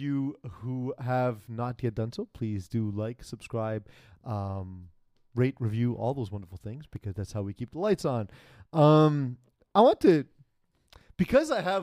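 Nothing technically wrong turns up anywhere in this bit of speech, so there's no fault to pin a time or a cause on.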